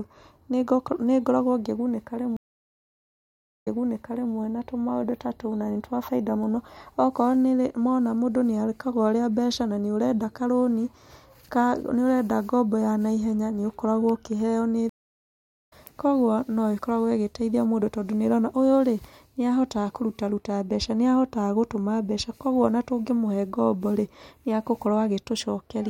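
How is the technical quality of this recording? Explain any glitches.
The speech breaks twice with stream reconnects. From 2.37 to 4.34 s the sound stops for 1.24 s, then restarts 0.73 s earlier, repeating material before "na tũmaũndũ ta tũu". The connection dropped and the server resent a burst to a fresh decoder. From 14.89 to 15.73 s a 0.74 s gap resumes roughly half a second later, skipping ahead as a live stream does after reconnecting.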